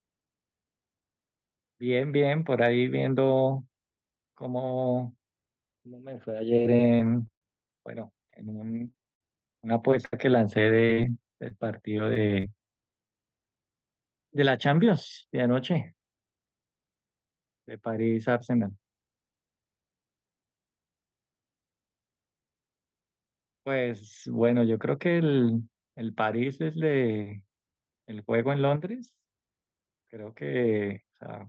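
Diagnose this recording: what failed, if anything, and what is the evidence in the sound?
Network packet loss on the call path caused repeated packet loss (robotic sound) in three stretches: 6.62–7.42 s, 8.02–10.13 s and 10.55–12.70 s. Holes up to 80 ms were patched by extending prior sound, leaving choppy stretches (about 18%, 12% and 10% concealed). Unlike buffer underruns, the gaps are filled rather than silent.

A short concealed packet loss occurs at 13.07–13.10 s. About 10 ms of audio never arrived and was rebuilt from the preceding sound, giving a brief smear or wobble rather than a hard dropout or click. It is isolated, not part of a robotic run.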